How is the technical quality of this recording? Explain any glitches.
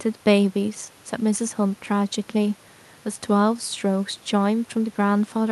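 The technical quality of this speech recording is good, and there are no glitches to explain.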